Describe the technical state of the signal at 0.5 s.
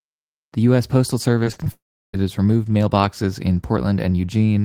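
At 0.5 s the signal is intact, with no audible fault in the speech at that moment.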